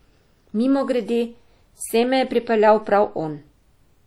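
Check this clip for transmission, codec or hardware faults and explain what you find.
One fault runs through the entire speech clip. Likely WMA compression leaves plainly audible damage: long transform blocks smear quantisation noise over tens of milliseconds, producing ringing, washy speech with hiss that breathes with it, fitting roughly 48 kbps. The smearing with no bandwidth cutoff, since content reaches 20.1 kHz, separates it from lowpass-limited codecs.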